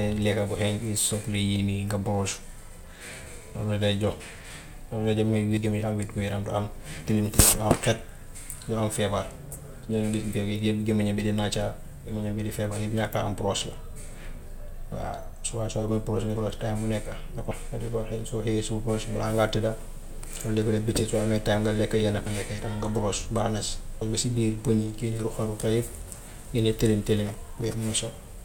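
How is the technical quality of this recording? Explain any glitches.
The speech recording has six abrupt forward jumps. Compressed frames are skipped at 5.57, 9.83, 16.36, 17.51, 22.26 and 24.01 s. The decoder drops runs of whole frames, consistent with frames of about 26 ms. Each time about 0.2 s of speech vanishes, about 0.3 s at 9.83 and 24.01 s, and the join is a short smeared blip rather than a click.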